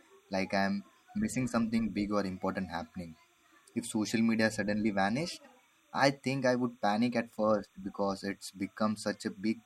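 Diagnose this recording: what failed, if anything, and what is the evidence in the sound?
Timecode bleed, analogue wiring: a faint warble switching near 1 and 2 kHz runs under the speech throughout, as 30-frame linear timecode leaks across.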